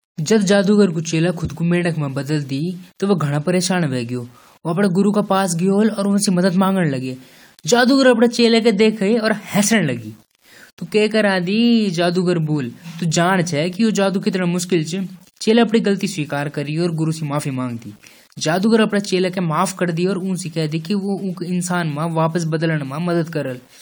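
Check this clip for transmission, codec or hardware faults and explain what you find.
One fault runs through the whole speech clip: low bit depth without dither. From start to finish, the quieter parts of the speech carry a grainy, rasping edge that changes with the voice. The softest decays break into a sputter or cut to silence. The cause is likely samples that were rounded to only a few bits with no dither, which fits an 8-bit quantiser, leaving distortion only about 35 dB below the signal. Because this error follows the signal, it rises and falls with the voice. That tells it apart from steady hiss or added dither noise, which keeps going through the gaps.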